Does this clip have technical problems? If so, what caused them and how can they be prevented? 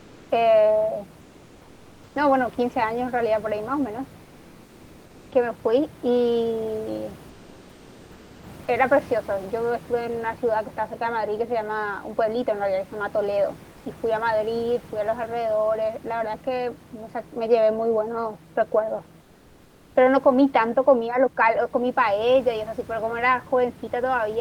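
Yes. Comfort noise replaces the background at 0 to 0.29, 1.21 to 2.15, 4.23 to 5.31, 7.29 to 8.43, 13.71 to 13.85 and 19.21 to 19.95 s: flat, slightly quieter hiss, likely from Opus DTX muting the pauses. Turning DTX off on the sender prevents it.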